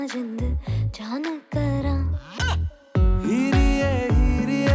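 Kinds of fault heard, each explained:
No technical faults can be heard anywhere in the signal.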